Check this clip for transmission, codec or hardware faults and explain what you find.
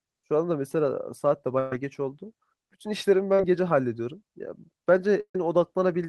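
There are two kinds of network damage here, no hardware or codec faults beyond that.

Burst of packet loss at 1.59–1.72 s and 5.21–5.35 s: about 120 ms and 140 ms of speech never arrived. The receiver stretched the last sound and faded it out, dropping to silence for about 70 ms in the second one, then jumped ahead.

Short concealed packet loss at 3.35–3.40 s: roughly 40 ms went missing and was patched by continuing the last sound, leaving a quick smear.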